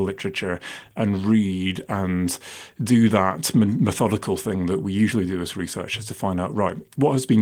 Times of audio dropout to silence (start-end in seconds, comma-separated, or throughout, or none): none